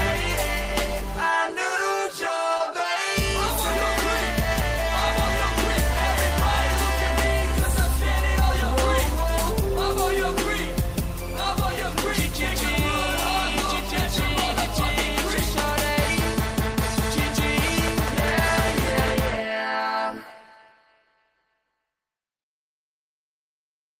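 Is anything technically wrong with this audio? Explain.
Yes, there's a short concealed packet loss from about 2.57 to 2.62 s. Roughly 20 ms of audio never arrived in time, and the receiver patched the gap by extending the preceding sound for about 24 ms before blending back. You hear it as a brief smear or wobble.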